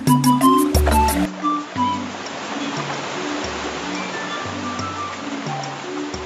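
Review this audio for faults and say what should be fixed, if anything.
Input switched to a poorer device, from 1.25 s to the end: the sound drops about 10 dB and turns duller and boxier in an instant, with nothing above 7.6 kHz afterwards and no gap at the change. A faint new background noise appears, roughly 50 dB below the signal. This is likely the recording input changing to a lower-grade microphone or a headset's call mode partway through. To prevent it, lock the input device for the session so the system cannot switch sources automatically.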